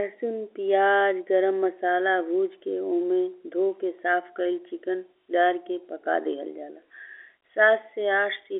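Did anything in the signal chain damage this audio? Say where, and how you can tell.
No, nothing damaged this audio.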